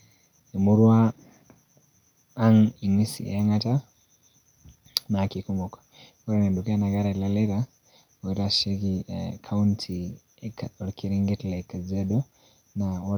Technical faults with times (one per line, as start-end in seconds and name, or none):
none